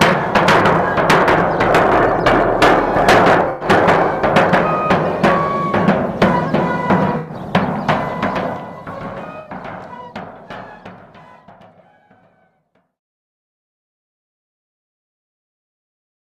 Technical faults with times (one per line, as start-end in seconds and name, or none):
3.44-3.69 corrupt frame concealed
7.18-7.34 corrupt frame concealed
9.39-9.49 corrupt frame concealed